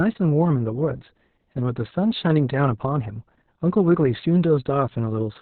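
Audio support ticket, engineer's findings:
Opus voice compression, throughout. Speech muffled, hoarse, slightly robotic; nothing above 4.3 kHz. Probable component: Opus encoder in SILK linear-prediction mode, narrowband. Mechanism: band cut to about 4 kHz at a very low rate, excitation coded coarsely, so harmonics smear and consonants dull. Heavy damage consistent with roughly 6 kbps and long frames, around 60 ms. Raise bitrate or allow wideband.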